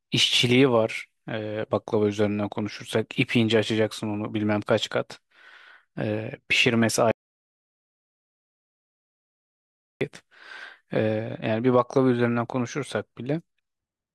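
A speech clip with an audio dropout to silence. At 7.11 s the sound cuts off mid-flow and returns at 10.01 s. The gap is silent, with no room tone. Nearly 2.9 s of speech is lost. The input likely disconnected or muted while recording continued.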